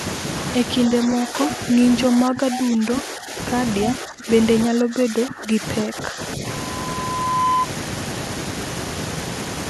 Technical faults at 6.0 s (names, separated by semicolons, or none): speech suppressed in double talk